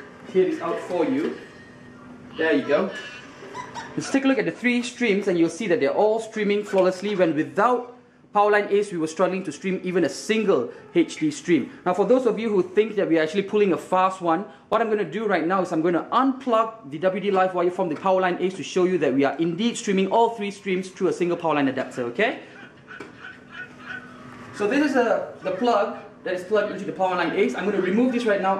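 Repeated buffer at 14.73 s and again at 24.08 s: fresh audio arrived late, so the same 11.6 ms slice played twice with a hard join, heard as a brief click or buzz rather than a stutter. The length fits a 512-sample buffer, and no audio appears to be lost.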